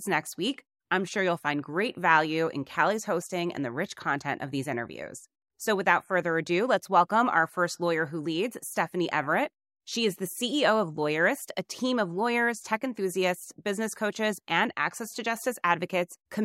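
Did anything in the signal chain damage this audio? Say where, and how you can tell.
No, nothing in the signal chain damaged this audio.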